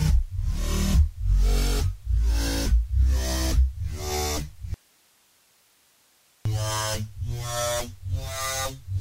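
At 4.74 s the sound cuts out abruptly and only a faint hiss, roughly 40 dB below the programme level, remains until it snaps back at 6.45 s, about 1.71 s later. This is an audio dropout to a faint residue: the wanted signal was likely lost upstream while the later stages stayed live and kept passing their own noise. On a waveform the trace collapses to a thin band; a spectrogram shows a sharp-edged block of low, even broadband noise.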